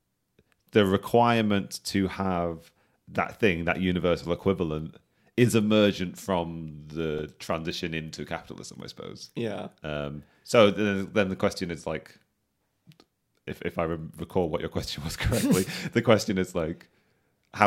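At 6.88 to 7.64 s, just before "into capitalism I suppose", there's a burst of six CD scratch ticks, about eight a second. A blemish is wiping out more data per rotation than error correction can repair, so the player patches each gap, leaving tiny clicks of a couple of milliseconds at most.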